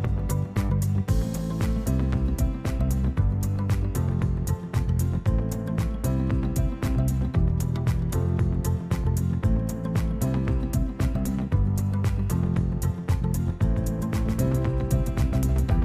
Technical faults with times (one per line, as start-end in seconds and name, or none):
13.64-15.84 doubled audio track